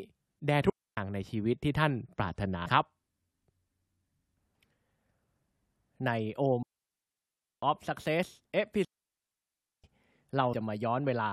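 At 0.70 to 0.97 s, a digital wireless dropout mutes the speech for about 275 ms. The receiver lost too much data and faded to a clean near-silent hole. Unlike an analogue radio dropout, no hiss or noise burst surrounds the gap. At 2.65 s, damaged data in a compressed stream makes a brief blip. The decoder misread corrupted frames and lost sync while hunting for the next header. Two longer digital wireless dropouts follow, at 6.63 to 7.63 s and at 8.85 to 9.84 s, each a clean mute of about 1 s. At 10.52 s, another short glitch from damaged compressed data sounds.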